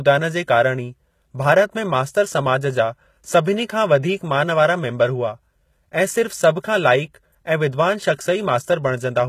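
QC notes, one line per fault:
Throughout, HE-AAC compression: the treble extends to about 20.6 kHz, but the damage is plainly audible, with s sounds turning gritty, metallic and lispy. This is likely HE-AAC v2, whose character points to a very low bitrate near 20 kbps. Only the lower spectrum is truly coded, and the upper band is rebuilt by copying lower content upward under a coarse envelope, so harmonics above the crossover no longer line up with the speech beneath.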